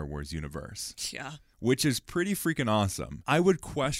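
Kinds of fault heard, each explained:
No technical fault can be heard in this speech recording. There is nothing to list under any kind of fault.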